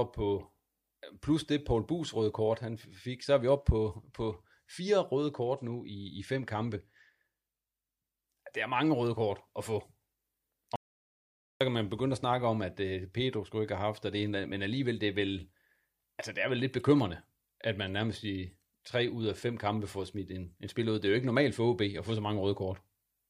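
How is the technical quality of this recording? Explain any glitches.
One glitch stands out: an audio dropout to silence from 10.76 to 11.61 s. The input signal was lost for about 0.85 s, most likely from a brief disconnection, failed link or accidental mute, while the recorder kept writing silence. The speech is cut off mid-flow and resumes abruptly, and the gap between is total silence with no room tone, so whatever was said during those 0.85 s is missing.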